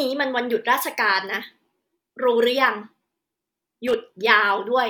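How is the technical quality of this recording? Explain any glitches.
The recording has one glitch, a short burst of loose connector crackle from 3.87 to 3.94 s. For about 70 ms the speech breaks into a rough, irregular scratching. The cause is a worn or dirty contact in the cable or jack that briefly makes and breaks as it shifts. Each break chops the signal, and any DC present on the line jumps at those moments, adding pops.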